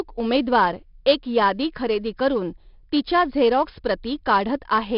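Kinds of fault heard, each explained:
4-bit ADPCM compression: coding each sample as a 4-bit prediction step leaves heavy gritty hiss on the speech; nothing above 5.4 kHz points to a low sample rate.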